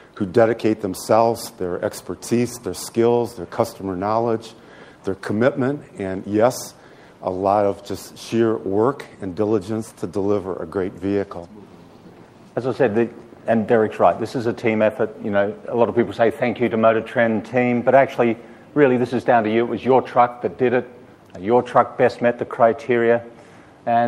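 No technical faults can be heard anywhere in the recording, and the signal holds steady throughout without any dropout, distortion or interruption.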